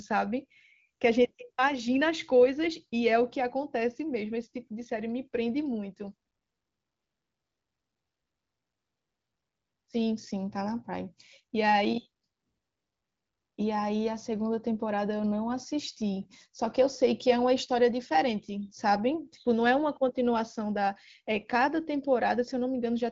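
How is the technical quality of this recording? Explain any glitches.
No glitches or technical faults can be heard here.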